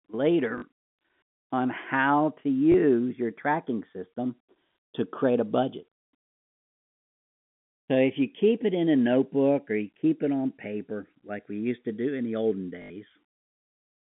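From the start, the two channels are drifting apart. Their clocks disagree by a few tens of parts per million. So the delay between them grows slowly, to under a millisecond by the end. Summed to mono, comb notches creep through the spectrum. It sounds like a slow flanging across the whole clip.

Packet loss with the last packet repeated appears three times. The first is at 0.58 to 0.62 s, a 40 ms gap. The second is at 2.72 to 2.74 s, lasting 20 ms. The third is at 12.82 to 12.9 s, lasting 80 ms. These lengths fit 20 ms packets. The receiver replays the last good packet until fresh audio arrives. Each repeat seldom lines up with the pitch. The longer runs buzz near 50 Hz, heard as a brief robotic stutter. The narrow telephone band of the G.711 line sits under all of this.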